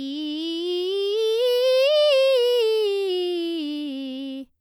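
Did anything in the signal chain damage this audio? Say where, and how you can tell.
No, nothing in the signal chain has damaged this music. There is no point in the audio where any stage of the chain left a fault that can be heard.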